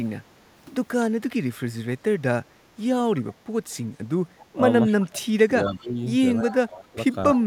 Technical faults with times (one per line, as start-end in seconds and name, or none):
2.03-2.07 speech suppressed in double talk
3.17-3.22 echo leak
4.38-4.44 echo leak
4.51-7.41 speech suppressed in double talk
5.66-5.87 echo leak